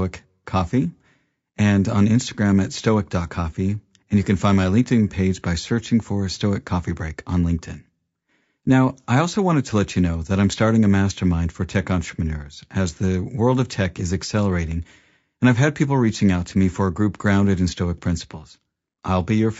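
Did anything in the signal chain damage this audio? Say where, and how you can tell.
Yes, and it's at the codec stage, running the whole way through the speech. The damage is plainly audible: the voice has a rough, grainy texture, with noise filling in between the harmonics, and the top band sounds either cut down or synthetic. That pattern likely comes from low-delay AAC compression, the AAC-ELD kind used on video calls, at a rate that fits roughly 32 kbps. Each short low-delay frame spreads too few bits across its roughly 500 frequency lines, so the gaps fill with quantisation noise.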